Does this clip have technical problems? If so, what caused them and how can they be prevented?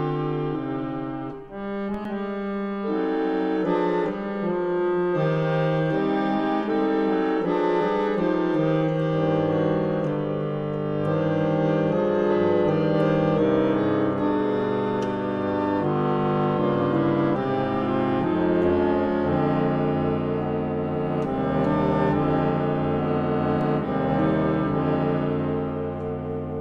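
Yes. Two DC steps occur, at 1.94 s and 23.61 s. At each, the waveform's zero line jumps suddenly, as when a converter recalibrates or an offset-carrying input is switched in. The offset then dies away like a 20 Hz high-pass settling, producing a low thump. Unlike a dropout or edit click, the sound runs on unchanged, with nothing missing or repeated. Prevent it with proper input coupling and by not switching sources or recalibrating during recording.

A CD skip occurs at 2.05 s. The laser jumps to another turn of the disc's spiral, so playback mutes very briefly and resumes from a different place, heard as a tick followed by a jump. Unlike a DC step or a plain dropout, the material itself is displaced, with a stretch skipped or repeated rather than merely interrupted. Prevent it with a clean, undamaged disc, a vibration-free player, or a secure ripping tool that verifies reads.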